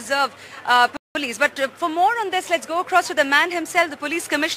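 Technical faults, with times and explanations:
0.97–1.15 s, playback stall: the sound cuts out in mid-flow for about 183 ms, leaving a hole of silence before it carries on. This is likely a player that ran short of data or had its output thread blocked, so nothing reached the output until it recovered.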